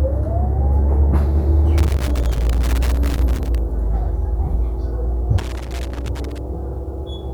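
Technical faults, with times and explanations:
1.78–3.58 s and 5.38–6.38 s, loose connector crackle: a worn or dirty contact keeps making and breaking, so the signal is chopped in short, irregular bursts of scratchy crackle, about 1.8 s long and then about 1 s long. The waveform shows jagged dropouts and sudden spikes where the circuit snaps open and closed. On a spectrogram these appear as scattered, full-height vertical streaks, unevenly spaced across both spans.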